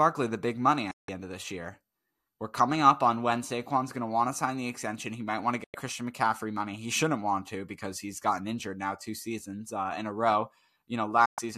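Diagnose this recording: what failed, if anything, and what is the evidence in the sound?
Digital broadcast dropout in reception: the speech mutes with a 3 ms fade at 0.91–1.09 s, 5.64–5.75 s and 11.26–11.38 s, which fits whole lost frames of about 24 ms. The receiver muted until good frames returned. A spectrogram shows full-band vertical blanks, and the waveform flat silence.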